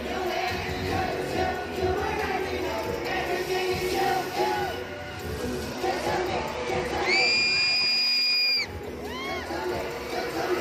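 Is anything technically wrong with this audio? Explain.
Yes. From about 4.97 s to 8.34 s there is a Bluetooth SBC bit pool drop. The sending device cut the codec's bit budget to keep a strained link alive, a fall that fits a bit pool going from around 28 to 13, near 102 kbps. The highest sub-bands lose their bits and the rest are quantised coarsely, so the treble dulls and a gritty noise rises. Unlike a plain low-pass filter, the roll-off comes with added grit, and both clear when the rate recovers at 8.34 s.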